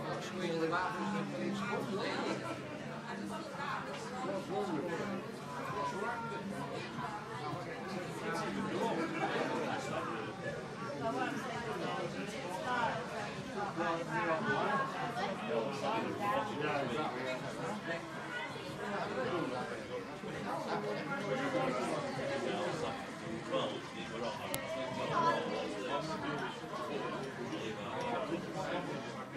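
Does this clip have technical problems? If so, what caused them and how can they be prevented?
Yes. At 24.54 s a file header was played as audio: the recording was assembled from separate WAV pieces, and the next piece was appended or streamed without stripping its header, so those few dozen bytes of metadata were read out as samples. The result is a single sharp, loud click that has nothing to do with the surrounding sound. To prevent it, concatenate decoded sample data rather than raw files, skipping each piece's header before joining.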